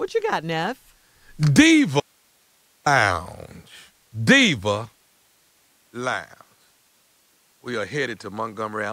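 A speech recording with two faults. At 2.00 s the signal cuts out abruptly for about 0.86 s, returning at 2.86 s. Only hiss fills the gap, roughly 40 dB down. This is an audio dropout to a faint residue, likely a brief loss of the signal while the path stayed live. At 5.01 s the sound changes instantly, with no gap, and stays that way to the end. It turns duller, with nothing above 9.7 kHz, drops around 10 dB in level, and carries a new noise floor roughly 45 dB below the speech. The likely cause is an input switched to a poorer device.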